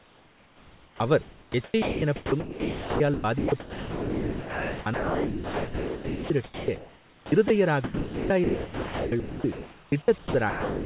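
Right from the start there's overdone noise removal running across the whole clip. The room noise sits about 31 dB below the speech, and the suppressor is clamping hard on any frequency band that gets near its noise estimate. That wipes out the background but leaves little twinkling specks, and it takes the softer parts of the speech with it. It's also band-limited, with nothing above 4 kHz, which fits the narrowband call codec.

On top of that, from 0.0 to 7.5 s the sound keeps dropping in and out. The choppiness is likely the sender's voice detector flipping between sending and muting. Roughly 6 s of that stretch gets swapped for synthetic comfort noise, so quiet syllables and word edges vanish. After a short gap it happens again from 7.84 s to 10.85 s, with about 2.3 s filled the same way.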